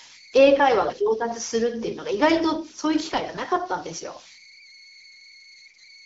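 Speech coded over AMR wideband (HD Voice) at 12.65 kbit/s, which stays fairly clear. Underneath it all, though, there are converter idle tones. A whistle sits somewhere around 2 kHz, with grainy noise about 23 dB below the signal, and you can hear it in the pauses. It sounds like an undithered delta-sigma converter getting stuck in repeating bit patterns whenever the input goes quiet, so those loops come out as a steady tone. Then there are three bursts of AMR bit errors: 0.82 to 0.98 s, 3.09 to 3.48 s, and 5.66 to 5.80 s. In each one the voice keeps roughly its pitch and level but turns hoarse and gargly. That's what you get when the less-protected bits of each frame arrive flipped while the core checksum still passes, so the decoder places its excitation pulses wrong and gets the gain and spectrum details off. The last burst has the highest error rate, around 15 percent against roughly 5 to 7 percent for the earlier two, and the middle one is the longest, covering about nineteen 20 ms frames.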